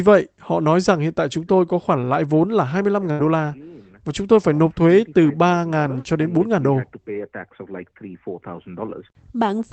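At 3.11 to 3.22 s, just before "la và chúng tôi", a burst of packet loss: about 73 ms of concealment holds and fades the last sound, then about 80 ms is skipped. A spectrogram shows smeared, dimming bands cut off near 8 kHz, and the waveform decays before an abrupt restart.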